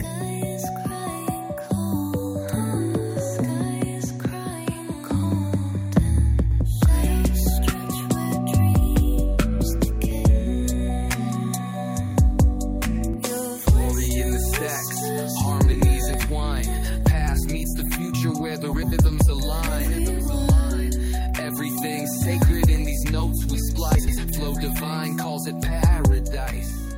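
At 2.53 s the sound jumps forward. About 50 ms is missing, with no gap. This is a dropped buffer, likely an overrun: samples were overwritten before being read. The same skip recurs at 16.14 s.

From 6.44 to 6.61 s, frames are out of order. Two blocks of about 93 ms play swapped. This fits runs of four frames each. The result is a garbled flutter. No time is lost. It returns at 15.72 to 15.82 s with blocks of about 83 ms, then at 18.73 to 18.93 s and 23.98 to 24.18 s.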